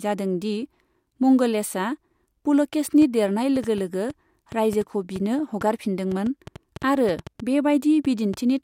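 From 3.02 s to 8.35 s, a train of clicks runs under the speech. About four clicks arrive each second, roughly twenty in all. Their spacing is uneven, but each click has much the same sharp shape. They peak a few decibels above the speech itself, so they stand out clearly. They tick on through the pauses too. The likely cause is interference from nearby equipment or a faulty connection or power supply.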